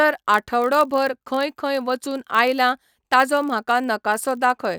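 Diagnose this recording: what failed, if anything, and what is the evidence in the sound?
A block size mismatch (padded) at the driver or buffer stage, present throughout this speech. A steady 46.9 Hz buzz rides under the sound, which fits a 1024-sample read block. Each block arrives slightly short and is zero-filled, so playback runs at 0.999x speed.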